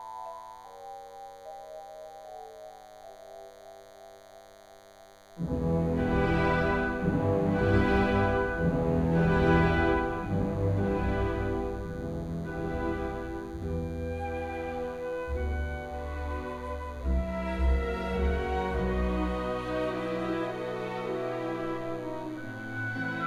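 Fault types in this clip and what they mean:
DECT cordless phone buzz: A thin, steady buzz runs under the audio for the whole clip, sitting roughly 30 dB below the programme level. It comes from a nearby DECT handset or base transmitting a short radio burst every 10 ms, which the audio circuitry rectifies into a 100 Hz pulse train. On a spectrogram it shows as evenly spaced horizontal lines at 100 Hz and its many harmonics. The waveform shows a faint repeating spike pattern with a 10 ms period.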